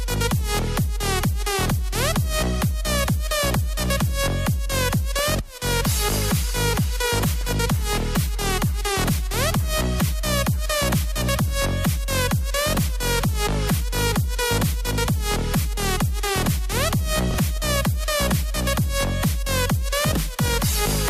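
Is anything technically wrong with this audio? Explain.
Yes, there are two kinds of fault.

DAB burbling at 5.15 to 5.30 s, 7.41 to 7.51 s and 17.56 to 17.85 s: weak reception leaves a low residual rate of bit errors that corrupt sub-band scale factors and samples. This sounds like short blips of noise, with sub-bands jumping in level. On a spectrogram it shows as isolated bands flaring for up to a frame each.

Chunks out of order at 17.31 to 17.35 s: a 10 ms chunk plays three chunks late. This gives a jumbled moment, and the waveform shows three abrupt discontinuities at the joins.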